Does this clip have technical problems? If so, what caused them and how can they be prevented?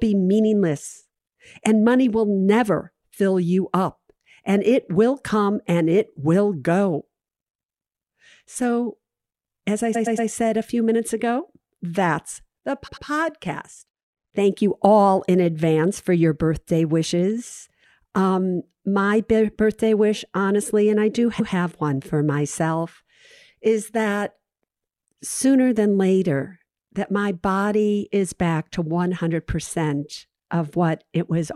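Yes. Repeated frames stutter the speech at 9.94–10.29 s, between "as I" and "said a few minutes". A 116 ms block plays three extra times. At 12.87–13.05 s, after "minutes ago that's the", a 93 ms block repeats twice. At 21.39–21.53 s, between "honestly and I do" and "one for myself", a 139 ms block repeats once. Each time, a short run of compressed frames was delivered again and decoded more than once, which lengthens the audio by the repeated time. To prevent this, deduplicate frames by sequence number or timestamp before decoding, and make sure retransmission and buffering logic never writes the same data out twice.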